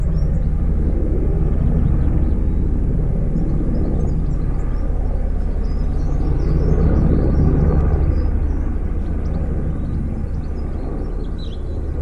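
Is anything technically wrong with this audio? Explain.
No, there is no audible technical fault in this audio.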